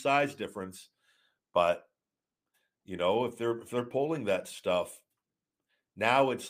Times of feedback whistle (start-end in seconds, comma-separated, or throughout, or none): none